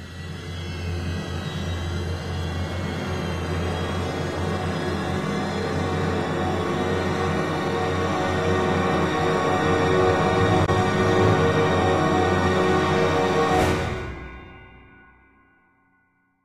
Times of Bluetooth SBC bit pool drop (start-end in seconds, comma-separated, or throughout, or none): none